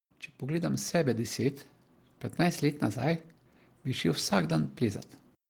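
From 0.05 to 1.41 s, automatic gain rising: the gain control judged the input too quiet and raised its level step by step, adding about 4 dB. The speech and the background noise beneath it swell together across that stretch instead of holding steady.

Between 2.43 and 3.11 s, a drift correction step is the likely cause: clock-matching software appears to have changed the playback rate in one jump. The speech runs about 5.65% fast and rises about 95 cents, nearly a semitone, then snaps back to normal.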